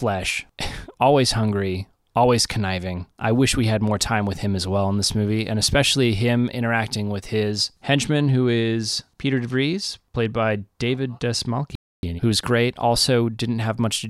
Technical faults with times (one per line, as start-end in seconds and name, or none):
11.75-12.03 playback stall